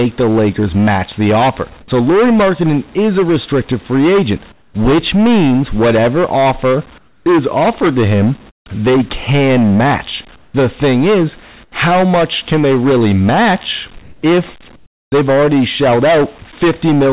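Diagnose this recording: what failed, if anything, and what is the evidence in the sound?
Hard clipping at a gain or converter stage, throughout: overdriven by about 15 dB, so about a fifth of samples sit flat-topped on the waveform, with harsh fuzz and broadband harmonic smear on the spectrogram.

Comfort noise in place of the background at 4.52–4.74, 6.98–7.26, 8.50–8.66, 10.36–10.54, 11.64–11.72, 14.02–14.22 and 14.76–15.12 s, likely from call-path discontinuous transmission. Featureless, quieter noise appears as smooth, uniform spectrogram patches.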